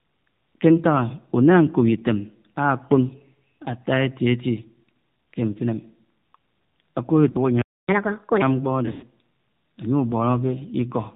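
Throughout, the speech carries the sound of the AMR narrowband mobile codec. Nothing above 4 kHz survives. The voice is dull and boxy. A vocal-tract model driven by sparse pulses rebuilds it. At this low rate the damage is plainly audible: buzzy, thin and synthetic. The level of damage fits the 7.4 kbps AMR-NB mode.

At 7.30 to 7.37 s come lost AMR speech frames. About 40 ms is missing, which fits two dropped 20 ms frames. The decoder fills the gap by reusing the last pitch and vocal-tract settings at falling gain. It is heard as a brief dip. Then the voice returns, rough for a moment.

From 7.62 to 7.88 s there is a playback stall. The sound stops mid-flow for about 0.27 s. It is a clear, hard gap of silence. The player most likely ran dry of data or had its thread blocked. Output resumes where it left off.

From 7.88 to 8.42 s the player makes a catch-up at higher speed. It resamples its backlog at 1.5 times normal speed. 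Pitch rises by about seven semitones along with the tempo. The speech sounds hurried and chipmunk-like for roughly half a second. Then speed and pitch drop back to normal.

At 8.86 to 9.04 s there are more lost AMR speech frames. About 120 ms is missing, scattered over 160 ms, which fits six lost frames in all. The longest run is 100 ms. Concealment stretches the sound into a drawn-out, warbling tone. It fades towards silence. The voice comes back weak and rough.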